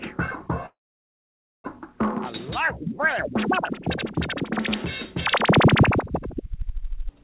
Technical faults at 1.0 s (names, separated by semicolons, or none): call audio freeze